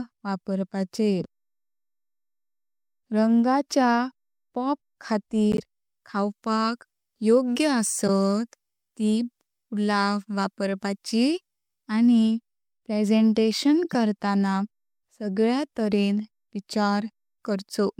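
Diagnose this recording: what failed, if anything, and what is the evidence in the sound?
The failure is at the codec stage: a corrupt frame decoded. Short glitches cut across the speech at 5.52 to 5.60 s, 8.07 to 8.09 s, and 13.83 to 13.95 s. The first is loudest, peaking near -10 dBFS. The last is quieter but longer. Each burst lasts roughly 20 to 120 milliseconds, which suggests a handful of damaged frames at a time. Flipped bits scrambled the gains and codes. The decoder still played those frames, so energy landed at the wrong frequencies.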